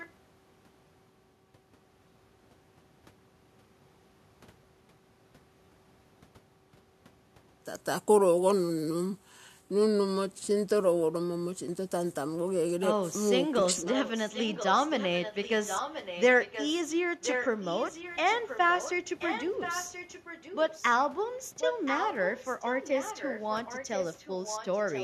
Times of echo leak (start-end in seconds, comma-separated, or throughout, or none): 0.00-0.10, 13.89-16.83, 17.22-20.93, 21.59-25.03